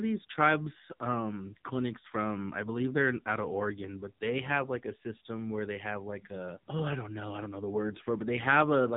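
From start to finish the speech carries AMR narrowband mobile codec damage, and it is heavy. Nothing above about 3.8 kHz survives, so the sound is boxed into the telephone band and sibilants lose their edge. The codec rebuilds each 20 ms frame from a vocal-tract model fed by a handful of pulses, and at this depth that leaves a buzzy, synthetic quality, which fits a low AMR-NB mode around 6.7 kbps.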